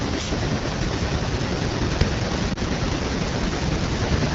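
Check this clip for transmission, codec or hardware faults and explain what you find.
Two faults are present in this speech clip: low-rate wideband codec damage throughout, and one dropout from a lost frame.

The AMR wideband (HD Voice) codec affects the whole clip. The roughness fits the 8.85 kbit/s mode, the second-lowest rate. At that rate the coder has too few bits for its pulse model of the voice source. Detail up to 6.4 kHz gets coarse. The top band to 7 kHz is only shaped noise. The result is plainly audible. Speech sounds raspy and grainy, with a hissy upper edge.

Lost AMR speech frames appear from 2.53 to 2.58 s. The sound points to a single lost frame of about 20 ms. A radio error likely corrupted that frame. The decoder then rebuilt the gap by repeating the last good pitch and vocal tract settings at reduced gain. You hear a brief dip or warble. Speech resumes a little weak or rough for a moment.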